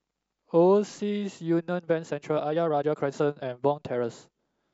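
Speech, with a time-stretched section from 1.71 to 4.05 s. Here the pace jumps abruptly to about 1.62 times normal speed, yet the pitch stays where it was. The sped-up passage sounds rushed. Short pieces of the signal have been dropped to shorten it without raising the pitch. The likely cause is software squeezing this stretch to fit a shorter length. Normal pace returns after 4.05 s.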